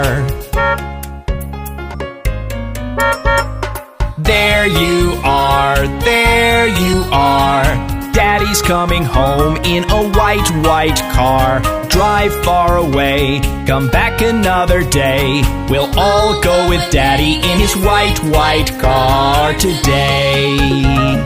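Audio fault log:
1.93, 6.92, 11.82, 17.56 and 21.13–21.15 s: damaged data in a compressed stream, five brief blips lasting about 16 to 20 ms each. Corrupted bytes make the decoder misread those frames and lose sync until it locks onto the next frame header, producing a short chirp, squawk, click or hole.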